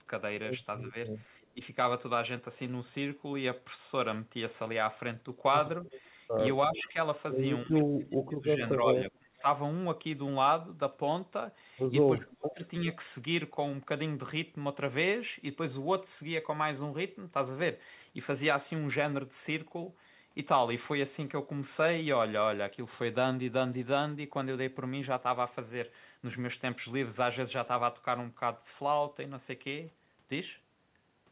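Echo leak, 0.02 to 1.46 s: a faint copy of the speech trails about 360 ms behind, roughly 25 dB below it. The likely cause is a loudspeaker echo that the far end's canceller failed to remove.

Speech suppressed in double talk, 0.91 to 1.6 s: the level dips by up to about 15 dB for roughly a tenth of a second. The echo canceller likely turned everything down while both sides spoke at once.

Speech suppressed in double talk, 5.85 to 9.46 s: this is deeper, with choppy drops of about 30 dB that add up to about 1.5 s of lost level. The likely cause is again suppression during overlapping talk.

Echo leak, 5.88 to 6.89 s: the delayed copy returns about 383 ms late and about 20 dB down, likely loudspeaker pickup slipping past the canceller.

Echo leak, 8.94 to 9.11 s: a short scrap arrives about 394 ms late and is louder, only about 15 dB down, likely from the same leaking loudspeaker path.

Speech suppressed in double talk, 12.16 to 12.87 s: the speech drops by about 30 dB in pieces, for roughly half a second in total, likely clamped during simultaneous talk.

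Echo leak, 12.64 to 12.68 s: a barely audible fragment sits about 409 ms behind and about 35 dB down, likely residual echo from the loudspeaker.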